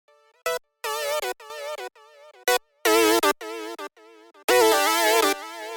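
A sudden gain jump hits at 1.5 s, where the sound and its background noise rise together by about 9 dB and stay raised to the end. That shared, instantaneous step, rather than a fade, sets it apart from compression or automatic gain, likely an unramped digital gain change.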